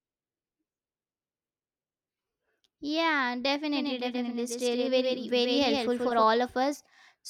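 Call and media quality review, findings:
Doubled audio track, 3.73 to 6.23 s: speech plays twice, with a full-band copy trailing around 150 ms behind, a few dB under the original. No decay or room colour on the echo, and it cuts in and out abruptly. Likely a second capture path or an edit layering two offset copies. Worth checking the mix bus.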